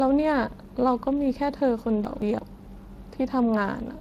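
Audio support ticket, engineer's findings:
Speex codec throughout the speech: hoarse, noisy grain with plainly audible coding damage, nothing above 15.3 kHz. CELP is starving the excitation of bits, so voicing turns rough; the sound fits a mid-low setting around 22 kbps.

Chunks out of order, 2.05 to 2.39 s: a jumbled moment. A roughly 0.17 s chunk landed one slot late and plays after its successor. Nothing's missing, just swapped, leaving three hard joins. Probably the buffer or write stage.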